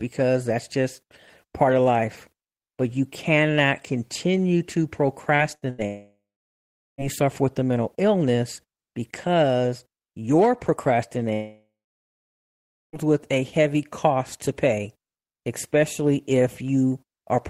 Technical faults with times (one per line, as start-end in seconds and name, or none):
5.35-5.42 short concealed packet loss
5.55-5.81 burst of packet loss
5.86-7.01 long network dropout
11.34-12.96 long network dropout